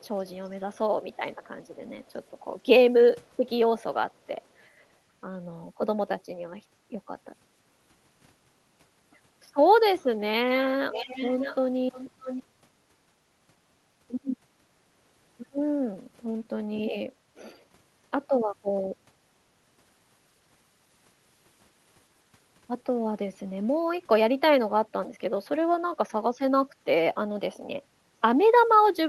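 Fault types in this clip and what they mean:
Echo leak: a delayed copy of the speech returns behind the talker, faint at 4.22 s with about 494 ms lag, then much louder twice between 10.91 and 12.43 s at about 613 ms lag, likely loudspeaker sound the far end's echo canceller failed to remove.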